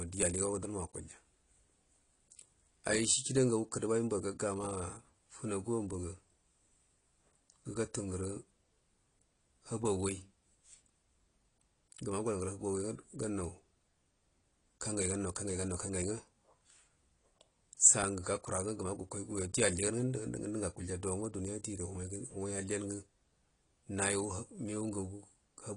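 From start to finish the speech carries AAC compression damage, likely from AAC-LC at a low bitrate, consistent with about 32 kbps. Nothing sounds above 10.2 kHz, so it is dull, with warbly, fizzy sibilants. A spectrogram shows a flat ceiling there.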